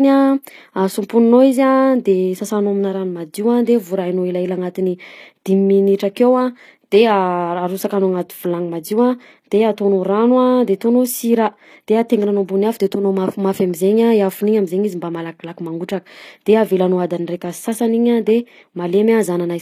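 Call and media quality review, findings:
HE-AAC compression, throughout. Treble gritty and metallic, sibilants lispy. Nothing above 14.9 kHz. Plainly audible damage. Likely an HE-AAC encoder. Upper band rebuilt from copied lower bands, so harmonics misalign at the crossover. Degradation fits a stream near 24 kbps.

Pre-echo at 5.98 s. Short hiss about 16 ms ahead of a sharp attack. The attack itself sounds softened and smeared. Transform codec block. Quantisation noise spread across the block fills the quiet gap before the onset.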